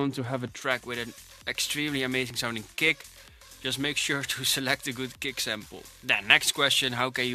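From 0.62 s to the end, pre-emphasis was left on: the treble lift applied before recording or transmission, here following the J.17 curve, was never undone by the matching de-emphasis. The top end sits about 11 dB higher at 10 kHz than at 1 kHz, so the sound turns thin, bright and hissy. Unlike a loose treble EQ setting or a harsh microphone, the lift climbs smoothly with frequency in that standard shape and stays constant, with no sign of level-dependent behaviour.

At 2.30 s, 4.30 s and 6.30 s there is an overlap between stream segments. Consecutive pieces of the stream claimed overlapping time stamps, and the player trimmed the shared stretch even though that audio was not actually duplicated, so between 6 and 18 ms went missing each time and the waveform jumps. Each is a tiny click or skip. The exact 2 s spacing points to segment boundaries rather than random packet loss, and no silence is inserted or material repeated, which separates it from a dropout or a stutter.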